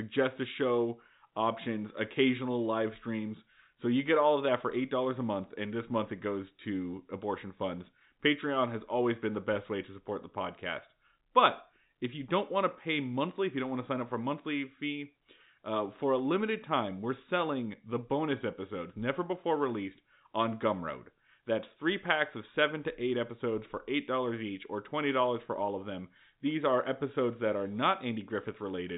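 No technical fault can be heard in the speech, which carries the band-limiting of G.711 telephone coding, with nothing above about 3.8 kHz, as the expected character of that format.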